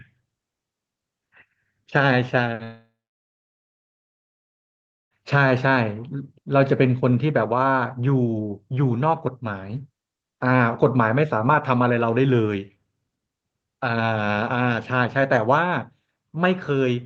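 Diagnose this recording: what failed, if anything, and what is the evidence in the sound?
Long network dropout, 2.63 to 5.16 s, at the network stage. At 2.63 s the sound smears into a short buzzy continuation that fades within a few tenths of a second, leaving about 2.2 s of silence before audio resumes at 5.16 s with roughly 2.5 s of material gone. The likely cause is a stall in packet arrival: the receiver's concealment stretched the last audio, gave up, then resumed. Audio on both sides is band-limited near 8 kHz by the Opus call codec.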